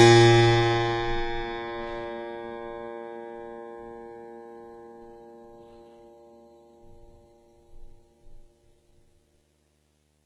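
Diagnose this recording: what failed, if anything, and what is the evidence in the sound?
Video or display buzz: a screen cable coupled into the analogue wiring, adding a steady 75 Hz buzz with hash, about 45 dB under the music.

The codec stage likely applied heavy HE-AAC compression, fitting about 16 kbps. Copied-up treble sounds gritty and metallic, and nothing survives above 14.9 kHz.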